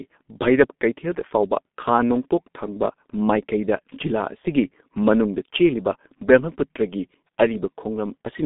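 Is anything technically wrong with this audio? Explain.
Yes. Throughout, the speech sounds muffled and hoarse, with smeared consonants and nothing above 3.8 kHz. This is G.723.1 codec damage: the narrow 200 Hz to 3.7 kHz band and the slowly updated voice model in 30 ms frames fit a bitrate around 6 kbit/s.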